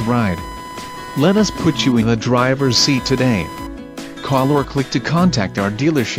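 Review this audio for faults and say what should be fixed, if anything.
Computer activity noise runs throughout, a buzzing whine pulsing at around 1 kHz and sitting roughly 15 dB below the signal. Processor, graphics or mouse load is disturbing the ground shared with the audio circuit. A spectrogram shows stacked harmonic lines near 1 kHz that flicker independently of the program material. Prevent it with a ground-isolated USB or external audio interface and balanced cabling.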